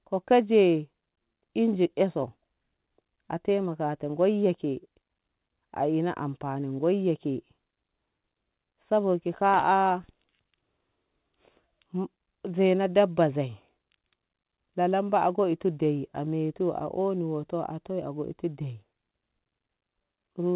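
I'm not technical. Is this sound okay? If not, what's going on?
Yes, this speech came through a phone-style call connection that is working as it should, and the only thing you may notice is that it sounds like an ordinary phone call, because such a line carries nothing above about 4 kHz.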